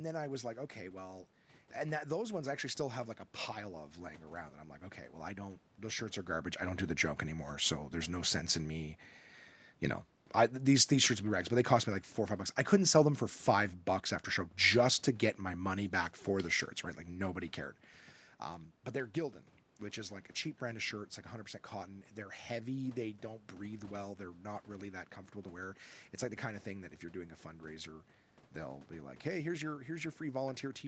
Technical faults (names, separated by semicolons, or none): none